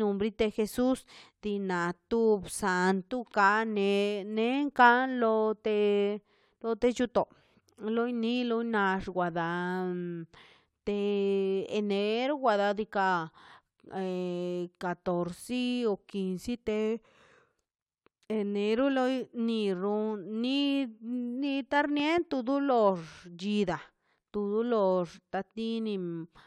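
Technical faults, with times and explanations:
22.00–22.20 s, loud pop: a voltage pulse, likely from a plug or switch, enters the chain, adding two sharp pops a bit louder than the ongoing speech.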